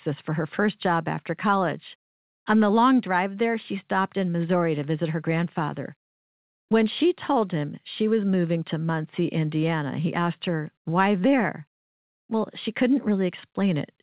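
No technical faults can be heard anywhere in this speech. It arrives over a call path whose sound stops at about 4 kHz, a narrowband telephone range that fits a G.711 mu-law link working as intended.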